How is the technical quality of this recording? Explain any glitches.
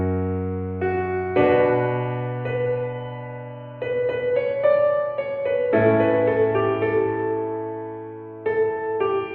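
No glitches are audible anywhere in the recording, and there is no fault to explain.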